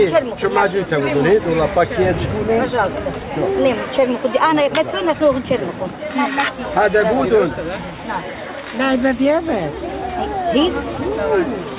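There are no technical faults to describe in time order; the audio comes through a telephone-grade call path with nothing above 4 kHz.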